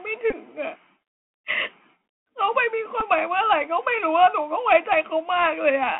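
Speech carried over a Bluetooth headset link shows Bluetooth CVSD headset codec damage throughout the clip. Nothing sits above about 3.4 kHz or below about 300 Hz, so a spectrogram shows a hard ceiling with an empty band above it. The one-bit up/down coder cannot track fast high-frequency energy, so sibilants come out scratchy and a granular hiss fills the floor between syllables. The damage is plainly audible and fits a 64 kbit/s CVSD link. The second fault is a Bluetooth headset packet repeated, first at 0.30 to 0.34 s. There, about 19 ms of losses are scattered over 30 ms, with the longest unbroken run around 15 ms. That points to roughly five lost packets, each replaced by the previous packet's bits decoded again. Repeating every 3.75 ms, they produce a brief buzz near 267 Hz. A waveform shows an identical short segment copied back to back, and a spectrogram shows harmonic striping at that spacing. 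At 3.00 s a shorter repeat of about 7.5 ms follows, consistent with two packets.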